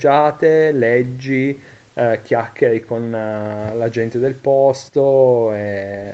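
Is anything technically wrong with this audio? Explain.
No, nothing in this speech stood out as a technical problem on listening; the call microphone processing it went through rolls off the lowest bass and leaves nothing above 8 kHz, as that path normally does.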